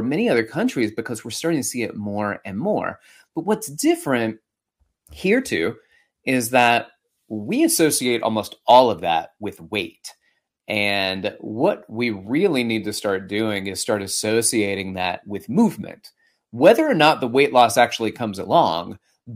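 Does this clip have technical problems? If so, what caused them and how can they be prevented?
Yes. Brief crackly distortion appears on peaks from 6.58 to 6.73 s and 8.70 to 8.80 s: hard clipping, with the speech driven about 3 dB and 2 dB past a stage's limit, so peaks were cut flat and produced harsh high harmonics. Lowering input gain to leave headroom prevents this.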